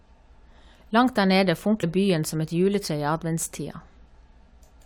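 Compressed frames skipped at 1.82 s: the decoder never plays a short run of encoded frames, either because they were missing from the file or because they were rejected as damaged. The speech jumps forward by around 70 ms, which fits about three lost frames of 23.2 ms each.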